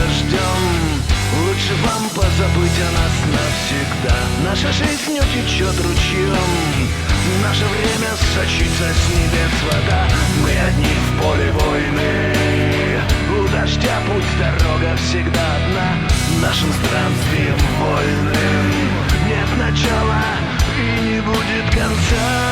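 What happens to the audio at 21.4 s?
At 21.4 s the audio plays through intact, with no audible fault at that moment.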